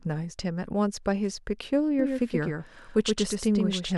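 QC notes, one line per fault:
1.99 s to end, doubled audio track: a second, slower capture path or an edit that left two copies out of step is likely feeding the same speech into the mix twice. From 1.99 s a full-band copy runs a fixed delay of roughly 150 ms behind, a few dB quieter than the original. It carries no decay or room colour, cuts in abruptly and sounds like a hard, dry slapback stuttering behind every syllable until the end.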